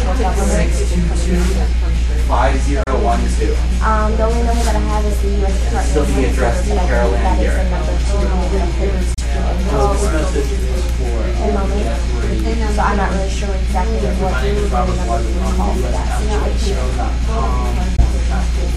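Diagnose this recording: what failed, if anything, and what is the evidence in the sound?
Bluetooth dropout, at 2.83–2.90 s, 9.14–9.19 s and 17.96–18.02 s: the sound cuts to silence, then resumes further along, as though it kept playing. Each gap matches roughly 30, 30 and 15 ms of lost audio, fitting whole frames likely missed on the wireless link to the headphones.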